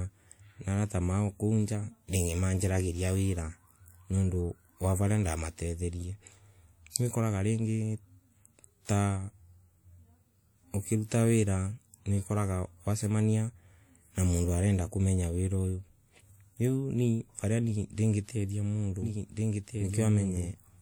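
Right at 19.02 s the speech suddenly picks up a doubled audio track that runs to the end. A second full-band copy cuts in abruptly, trailing about a second and a half behind and sitting roughly 5 dB under the original. There's no decay or room colour on it, so it isn't an echo. It's the same signal stacked twice, likely from a slower capture path feeding back in or an edit that left two copies out of step.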